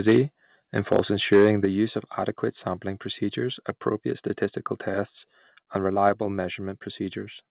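Harsh, crackling distortion hits the loudest speech peaks at 0.08 to 0.17 s, 0.78 to 1.0 s and 1.32 to 1.65 s, the last just before "use of adequate sampling". This is likely microphone overload. The input is driven about 4 to 6 dB past the converter's limit, so the tops of the peaks are cut off, on roughly a few percent of samples in the first and third bursts. On a waveform these show as flat plateaus. A spectrogram shows bright vertical smears of distortion energy reaching up to the 4 kHz band edge, which fits a narrowband G.711 call path.

At 1.65 s, right before "use of adequate sampling", the whole signal, speech and background alike, drops about 6 dB in one instant. A second drop of about 3 dB follows at 6.09 s, just after "appropriate statistical tests and". Both are likely the microphone volume being stepped down by the call software, and the first comes directly after the clipped burst. 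The waveform envelope shrinks abruptly at each point, and the spectrogram dims evenly across all frequencies with no fade.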